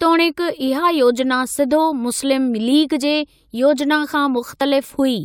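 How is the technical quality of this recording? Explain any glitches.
There's one glitch in this speech recording, a tiny skip at 4.61 s. It's an overlap between stream segments: two chunks claimed the same stretch of time, and trimming that overlap dropped about 5 ms of real audio, so the waveform jumps.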